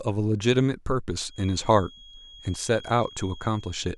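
From 1.25 s until the end of the speech clip, a feedback whistle sits underneath everything: a thin, steady tone at 3.3 kHz, roughly 25 dB below the speech, swelling and fading slowly in level. This is likely a loudspeaker-to-microphone loop poised right at the edge of feedback, ringing at one frequency without building up. Unlike runaway howl, it never grows. Unlike an electrical interference tone, it wavers rather than holding perfectly constant.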